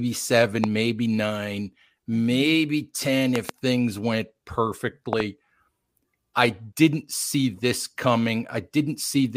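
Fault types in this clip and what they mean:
Loud pop: at 0.64 to 0.66 s, then 3.36 to 3.51 s and 5.13 to 5.22 s, a sharp transient jumps out above the speech, roughly 15 dB over it, and about 20 dB in the middle event. The first is a single pop; the later two come as a quick double. A sudden voltage step, likely from a plug, switch, static discharge or driver glitch, enters the chain, and the speech carries on underneath.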